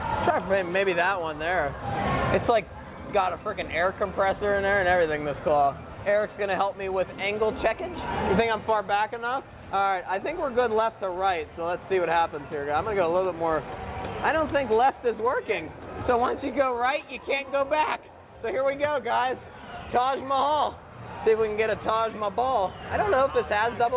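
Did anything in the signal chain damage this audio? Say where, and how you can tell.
No, nothing in the signal chain damaged this audio. It passed through a call path, and the band stops at 4 kHz, which fits a narrowband telephone codec such as G.711 mu-law at 64 kbps.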